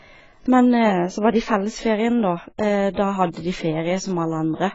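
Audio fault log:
Throughout, AAC compression: the speech sounds dull and smeared, with nothing above 7.6 kHz and a warbling, fizzy texture on sibilants and held sounds. The low cut-off and heavy damage are likely from AAC-LC at a low bitrate, around 16 kbps.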